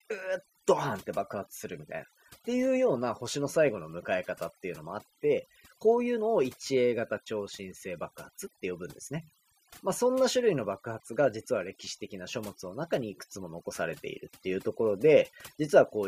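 Throughout the speech, overdone noise removal is audible: the reduction was set so aggressively that individual frequency bands near the estimated noise floor get cut hard, taking the quieter voice components with them. The background drops and breaks up into twinkling specks.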